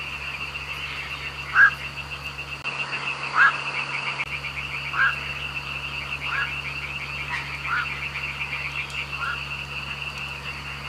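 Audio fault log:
2.62 to 4.26 s, input switched to a poorer device: the recording most likely jumped to a different microphone or a headset's call profile for this stretch, then switched back. A gap of about 20 ms marks the switch. The band stops near 10.5 kHz, so the top loses its air and sounds dull. The level shifts by roughly 5 dB, and a new background noise sits about 45 dB below the signal until the original tone returns.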